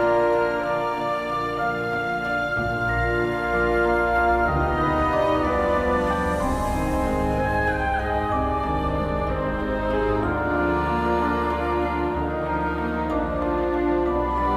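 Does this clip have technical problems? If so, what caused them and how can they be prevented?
No faults can be heard.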